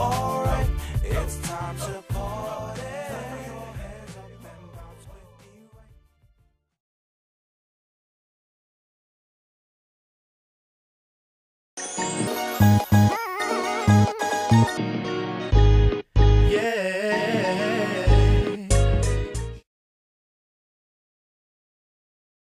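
Audio read two samples at a time (double speed) from 12.27 s to 14.77 s: the reader took each pair of samples as a single frame, as if the data held two channels or wider samples. The sound races at 2.0 times speed, an octave higher.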